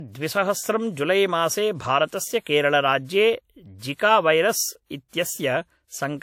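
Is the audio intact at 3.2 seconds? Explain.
No. At 3.2 seconds, as across the whole clip, the speech shows low-bitrate audio saved at a high bitrate. The file is likely a low-bitrate encode, something on the order of 64 kbit/s WMA, later re-saved as a 320 kbit/s MP3. The larger second encode cannot restore what the first one discarded. At this moment there is nothing above 17.7 kHz, and the earlier encoder's coding artefacts remain.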